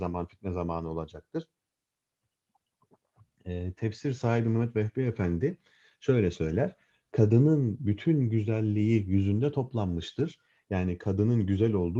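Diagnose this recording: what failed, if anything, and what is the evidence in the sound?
Nothing here has failed: the audio has simply come over a call path with the Opus codec at about 40 kbps, its top end tapering off around 12 kHz, and no stage in the chain has left any mark beyond that.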